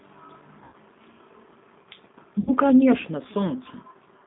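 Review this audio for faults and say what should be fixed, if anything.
The whole clip carries the sound of the G.729 codec: the speech is confined to roughly 150 Hz to 3.7 kHz, with nothing above, and it has a slightly rough, synthetic texture that is plainly audible. That character fits an 8 kbit/s coder that rebuilds each 10 ms frame from a vocal tract filter, a pitch predictor and a handful of pulses rather than sending the waveform. Preventing it means carrying the call on a wideband codec such as G.722 or Opus at a higher bitrate.

There are two drop-outs showing VoIP packet loss concealed by the speech codec, from 0.64 to 0.76 s and from 2.40 to 2.51 s. In each, the decoder keeps extending its last pitch and filter state with decreasing gain, so the speech is stretched into a fading buzzy tone or coloured noise instead of a clean gap. The missing spans are about 90 ms and 70 ms, which fits runs of roughly nine and seven consecutive 10 ms frames. 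Because each frame's prediction depends on the previous one, the sound stays weak or distorted briefly after packets resume. Preventing it means finding the cause of the burst loss on the network path and adding a larger jitter buffer or forward error correction.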